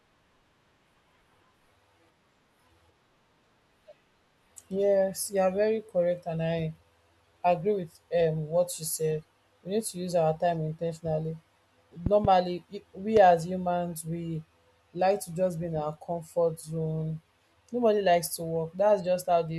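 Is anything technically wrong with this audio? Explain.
Yes. A loud pop lands in the speech twice. From 12.06 to 12.27 s, two sharp cracks follow in quick succession, peaking roughly 15 dB above the speech. At 13.17 s a single pop about 10 dB up comes just before "as humans we". Both most likely come from a sudden voltage step or spike, from a plug, switch, static discharge or driver glitch, which the following circuitry turns into a brief click while the speech carries on underneath.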